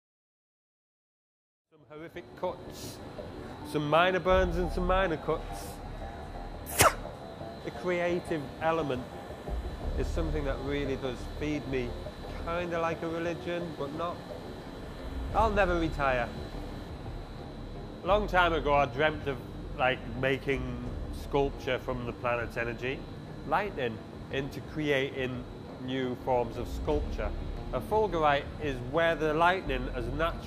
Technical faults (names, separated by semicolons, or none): none